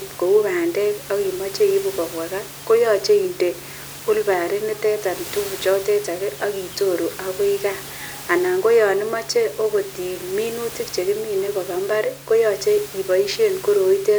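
No technical faults can be heard in this recording.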